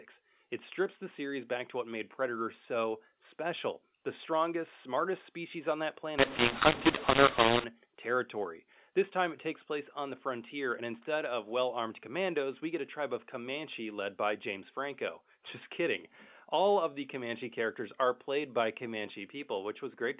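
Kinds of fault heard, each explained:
mu-law and A-law mixed up: from 6.18 to 7.64 s, telephone speech coded with the A-law curve is decoded as mu-law, so each sample lands on the wrong level. The speech turns harsh and distorted, and the quietest stretches are pushed up into audible noise.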